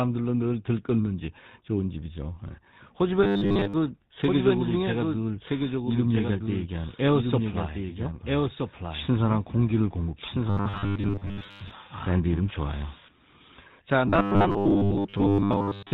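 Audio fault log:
throughout: GSM full-rate codec. The speech passes through the old GSM full-rate coder at 13 kbps, which rebuilds the voice from a vocal-tract model and a sparse pulse excitation and keeps nothing above 4 kHz, so the whole clip sounds muffled, buzzy and gravelly.
3.24 to 3.74 s, 10.50 to 11.73 s, 14.08 to 15.93 s: robotic sound from repeated short buffers. In all three stretches, new audio likely arrives too seldom, and about 70 percent of the time is filled by replaying the last 10 ms. That loop imposes a fixed 100 Hz buzz, turning the speech metallic and rigid.
4.26 to 13.08 s: doubled audio track. A second, full-band copy of the speech runs about 1.5 s behind at about 5 dB below the original, likely from a second, slower capture path. It has no room colour, and it cuts in and out abruptly.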